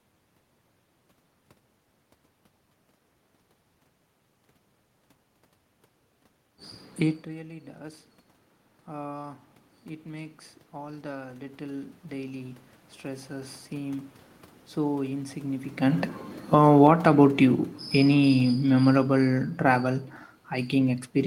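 From 10.03 s to 14.13 s there is an automatic gain rise. After the input level dropped by about 17 dB, the gain control slowly added about 7 dB, so the speech and the room noise swell together across roughly four seconds, ending just before "so insignificant".

Just after "so insignificant", automatic gain falling runs from 16.39 s to 20.05 s. The control judged the level too high and pulled its gain down by about 8 dB, so the speech and background noise sink together over several seconds instead of dropping at once.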